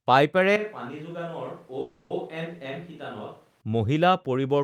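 Speech recorded over a call, with two overlapping faults. From 0.56 s to 3.61 s the sound becomes roomy and hollow, with thinner bass. The level drops by roughly 10 dB and background noise rises to about 30 dB below the speech. The change is abrupt at both ends. This is a switch to a distant microphone, most likely because the close microphone's signal dropped out and a farther pickup took over. On a waveform the envelope steps down to a smaller amplitude. On a spectrogram the low end thins, reverberant tails smear each syllable in time, and the noise floor rises across the band. Inside that stretch, from 1.81 s to 2.12 s, the sound stalls into a buzzy continuation of the last moment that fades without ever going silent. It then resumes where it left off, so nothing is lost but the timing is pushed 290 ms later. This is a call audio freeze, likely caused by delayed packets emptying the jitter buffer so that the receiver filled the gap itself. 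On a waveform this appears as a short repeating, decaying pattern. On a spectrogram it shows as flat horizontal streaks, a frozen spectrum that gradually dims.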